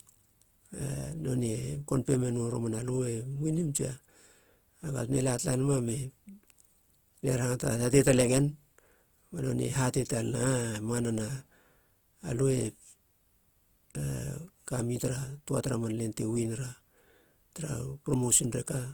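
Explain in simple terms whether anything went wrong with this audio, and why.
The speech was most likely squeezed by Opus compression, which saves space by spending very few bits on each slice of sound and filling the gaps with copied or noise-like detail. From start to finish, that makes the voice sound rough and grainy, with a gritty, noisy texture where the clean, smooth tone should be. The damage is plainly audible, although the high frequencies are still present, so the speech does not sound muffled.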